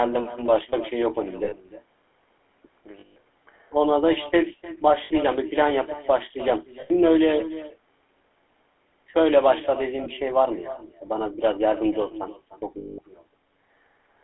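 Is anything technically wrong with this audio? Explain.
Yes, there are three problems in this speech clip.

The far end is playing the call through a loudspeaker, and its microphone picks that up again with no echo canceller to remove it. This is an echo with no canceller. The talker's own voice returns after the network round trip, roughly 300 ms later and about 15 dB below the direct speech. Every phrase is trailed by a fainter, thinner copy, which gives the call a hollow, doubled quality.

The speech has been squeezed through the GSM full-rate codec, and the sound fits its 13 kbps rate. That coder rebuilds the voice from a vocal-tract model fed by a sparse, regularly spaced pulse train, inside a line band of roughly 300 Hz to 3.4 kHz. The codec damage is plainly audible. The voice sounds buzzy and gravelly, and it lacks both deep bass and the sibilant top end. The top end is cut by the codec, while the missing deepest bass comes from the call's normal microphone processing.

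Lost GSM frames occur at 1.44–1.53 s, 3.00–3.17 s, 5.04–5.12 s, 6.80–6.91 s, 10.04–10.08 s and 12.78–12.99 s. Each gap lasts between about 20 and 200 ms, and the longest are at 3.0 s and 12.8 s. The decoder covers each missing stretch by repeating the last good frame's settings. Each gap is therefore heard as a held, rough, metallic ring instead of a clean dropout.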